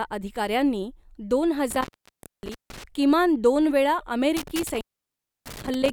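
From 1.71 to 2.84 s, after "अधिकाऱ्यांनी दोन", the speech crackles and drops to faint hiss for about 0.86 s, returning at "किमान दोनवेळा". It happens again from 4.37 to 5.90 s, with a gap of about 0.65 s. This is intermittent contact, a loose cable or plug briefly breaking the signal path.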